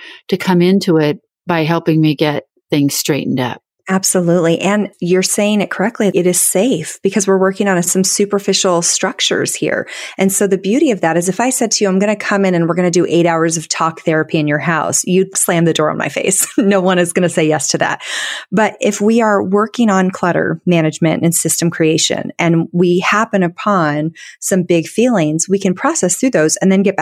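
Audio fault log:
Nothing stood out on listening to this speech recording.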